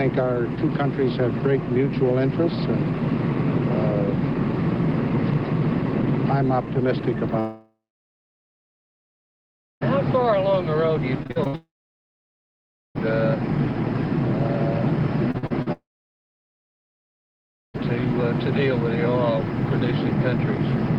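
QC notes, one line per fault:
7.39–9.83 s, 11.55–12.97 s and 15.72–17.76 s, long network dropout: In each stretch the last sound is drawn out into a brief fading buzz and then gives way to silence, lasting about 2.05 s, 1.28 s and 1.92 s respectively. The audio then resumes further along with that section gone. The likely cause is a stall in packet delivery. Unlike stuttering loss, the audio does not flicker; it stops outright for well over a second before returning.
11.23–11.55 s and 15.31–15.68 s, repeated packet loss (robotic sound): Within these two short spans there are five gaps and four gaps, the longest 62 ms and 45 ms. Each gap is patched by extending the preceding sound, so roughly half and two-fifths of each span is synthetic fill. This gives choppy sound with pieces missing rather than silence. The first run leads straight into the second dropout, and the second ends just before the third. 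The Opus call path, which limits high frequencies to about 12 kHz, is present underneath but is not a fault.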